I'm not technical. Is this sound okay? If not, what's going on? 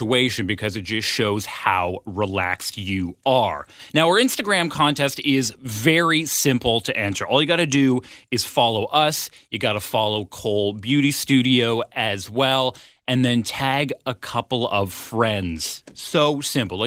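Yes, nothing stood out as a problem when listening to this speech.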